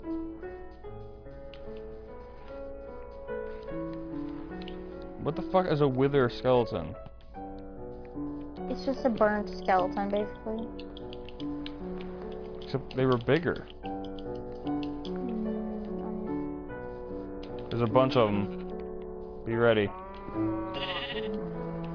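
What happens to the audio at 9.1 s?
Nothing goes wrong at 9.1 s; the audio there plays through intact, with no dropout, click or other fault.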